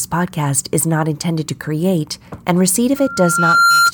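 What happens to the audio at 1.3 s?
Nothing goes wrong at 1.3 s; the speech carries on intact through that moment.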